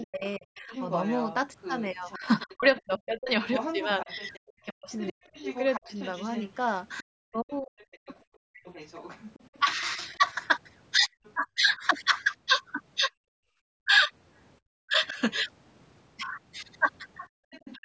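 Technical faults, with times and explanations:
0.0–11.3 s, other side's voice leaking through: a second voice runs beneath the talker at about 15 dB below the speech, most likely loudspeaker echo the canceller failed to remove. Unlike double-talk suppression, this adds unwanted sound rather than taking the talker away.
0.0–15.18 s, speech suppressed in double talk: the talker's own voice repeatedly sinks, by up to roughly 40 dB, for about 3 s in total. The likely cause is the canceller mistaking the talker for echo and ducking both. Unlike gating, the speech itself vanishes, not just the room.
17.29–17.46 s, background gated by the echo canceller: the room sound drops by about 36 dB for around 150 ms, then returns as the canceller releases the microphone. Only the background falls away here, which separates it from suppression of the talker's speech.
17.51–17.78 s, other side's voice leaking through: another brief scrap of the far voice surfaces, weaker than before at about 25 dB below the speech, most likely echo left behind by the canceller. 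It is added sound, not a loss of the talker.
17.74–17.85 s, speech suppressed in double talk: in the final moment the talker dips again, by up to roughly 40 dB over about 100 ms, likely the canceller clamping down while the far voice overlaps. The talker's speech, not the background, is what drops.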